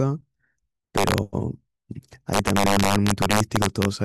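From 0.98 to 1.18 s, and again from 2.33 to 3.85 s, the speech hits integer overflow: peaks pushed about 2 dB and then about 3 dB past full scale wrap to the opposite sign instead of limiting, so loud moments crack violently, far harsher than clipping.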